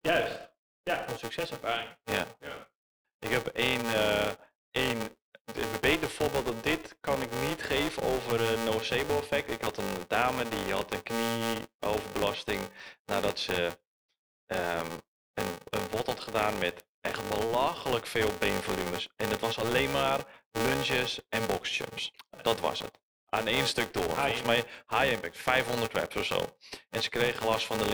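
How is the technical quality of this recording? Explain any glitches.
The technical quality is compromised by two faults, one persistent and one momentary.

Throughout the speech, a filter restarted on every block produces a 345 Hz buzz that follows the level of the speech. Each block starts from silence, causing a transient at every boundary, which fits a 128-sample block.

At 16.80 s, between "een een had gedaan" and "echt belachelijk veel beenvolumes", a bit error spike gives one sharp broadband tick. A flipped bit briefly throws one sample value by a power of two.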